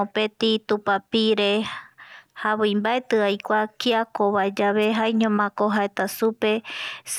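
At 4.82 s, lasting about 40 ms to 4.86 s, a wireless microphone noise hit breaks into the speech. The FM radio link briefly fades as reflected signals cancel, letting receiver noise surge up as a short swish of static over the voice.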